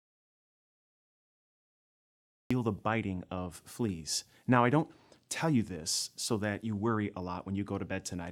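From the first instant to 2.5 s the clip is in an audio dropout to silence: silence with no room tone, and the speech begins abruptly mid-flow after that. The input was likely lost upstream while the recorder kept writing samples.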